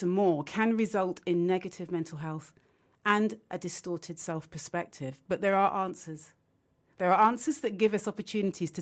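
No faults found in this speech: the band tops out around 8 kHz, as expected for wideband Opus on a call path, and the lowest bass is trimmed by the microphone's normal high-pass.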